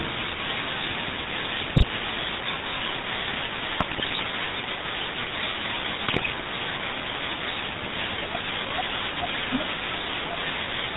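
The whole speech clip carries the sound of the GSM full-rate codec. The voice is buzzy and gravelly. Nothing above 4 kHz survives, so it sounds narrow and dull. The codec rebuilds the voice from a vocal-tract model driven by regular pulses, and it keeps only a thinned-out excitation. That leaves the rough, pulsed texture heard here. The damage is plainly audible and fits the 13 kbit/s rate of that codec.

GSM bit errors break in three times: 1.62 to 1.86 s, 3.78 to 4.22 s, and 6.06 to 6.31 s. Each burst turns the voice into squawks, pops and gargling. Corrupted bits reached the decoder. Wrong filter, pitch or gain values then warp the spectrum or spike the level frame by frame. The middle burst is the longest. Its length points to around twenty damaged frames.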